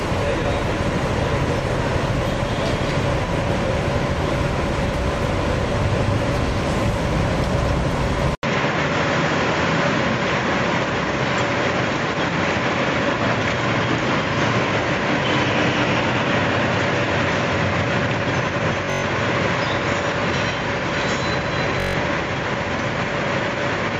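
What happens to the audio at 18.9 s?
A Bluetooth stutter runs from 18.86 to 19.04 s. Audio packets arrived late or not at all, and the receiver kept replaying its last buffer, giving a buzzing, machine-gun repetition. About 149 ms of audio is lost across those 171 ms, with the longest gap 128 ms, and playback then resumes further on.

The moment also falls inside a stretch with a narrower, duller band, beginning at 8.35 s after an 80 ms silence. The likely cause is the input switching to a poorer device. Nothing above 7.4 kHz remains, a new noise floor sits about 50 dB down, and the level is essentially unchanged.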